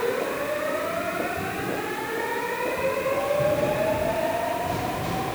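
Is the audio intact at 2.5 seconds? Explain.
No. At 2.5 seconds, as across the whole clip, the audio suffers from low bit depth with dither. It carries only about 6 bits of resolution, and random dither was added before each sample was rounded. The rounding error therefore spreads into a steady, even white hiss roughly 15 dB below the sound. Undithered truncation would instead give gritty distortion that follows the signal and drops out in quiet moments. This hiss stays constant and clean.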